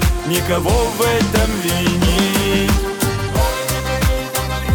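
No technical faults are audible.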